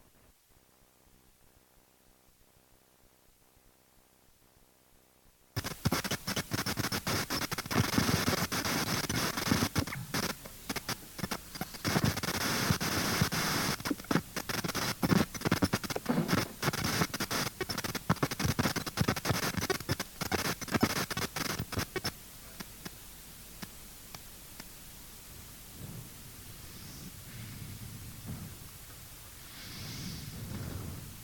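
No technical faults are audible.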